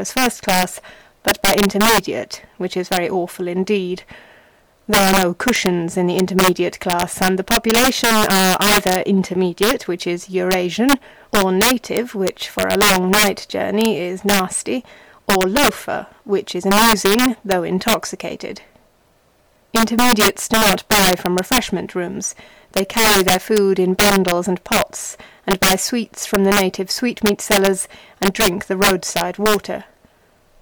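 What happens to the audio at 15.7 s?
Integer overflow, present at 15.7 s as it is throughout the clip: the signal is driven about 10 dB past the integer limit, so each peak that exceeds it wraps to the opposite extreme instead of being limited. Around two percent of samples flip this way, producing violent cracks on loud moments, far harsher than ordinary clipping.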